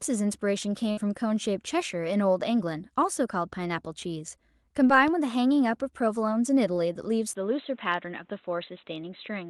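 The speech clip has four technical faults. At 0.91 to 0.99 s a burst of packet loss hits the stream: a run of packets arrived too late or not at all, leaving about 60 ms of audio missing, which the receiver papered over with about 57 ms of synthesized continuation. The last sound is held and faded out, heard as a brief buzz or hiss, and the speech then picks up slightly further along with that stretch gone. At 4.87 to 4.91 s a short concealed packet loss occurs. Roughly 20 ms of audio failed to reach the decoder in time, so the receiver extended the preceding sound, from its pitch if voiced or as shaped noise if not, and blended back into the real signal, producing a quick smear or flutter where a short consonant could drop out. At 5.08 to 5.10 s a loud pop lands on top of the speech, a single sharp transient peaking a few dB above the surrounding level while the talking continues beneath it. 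Its likely cause is a sudden voltage step or pulse, such as from a connector, a switch, static or a driver glitch, which the downstream circuitry then shaped into an audible click. At 7.33 s the input switched to a poorer device, most likely a change of microphone or a headset dropping into its call profile. A silence of about 20 ms marks the switch. From there to the end of the clip nothing above 4 kHz gets through, so the speech turns dull and boxy. A new noise floor sits about 35 dB below the speech, while the overall level stays about the same.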